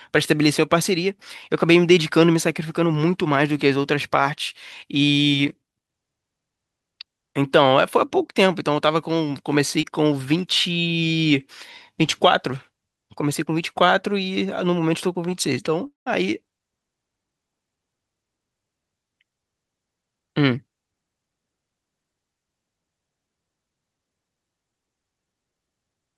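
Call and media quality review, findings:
Brief smear at 9.81–9.85 s, about 20 ms lost. Short concealed packet loss: the receiver's jitter buffer and decoder extended the preceding sound, then blended back.

Sound fades into a gap with silence of about 0.14 s at 15.87–16.08 s, then resumes further on. Likely long network dropout: about 200 ms never arrived, with concealment fading out.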